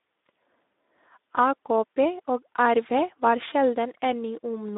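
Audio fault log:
Throughout: Speex codec. The speech has a noisy, hoarse texture from start to finish. This CELP coder has too few bits to rebuild the excitation accurately, so the fine harmonic detail of the voice is replaced by a rough, noisy approximation. The damage is plainly audible, which fits a low setting around 11 kbps. The speech sits in a narrow line band from about 250 Hz to 3.7 kHz, so low-end body and upper-band air are both missing.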